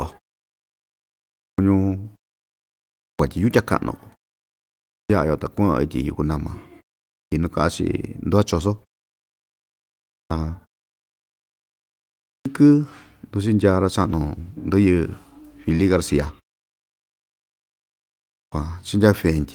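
Clipped starts after a pause occur at 1.37, 3.0, 4.91, 7.13, 10.09, 12.25 and 18.3 s. The output goes idle in each silence and wakes late. About 0.19 to 0.22 s is lost. Speech bursts in abruptly, missing its first sounds.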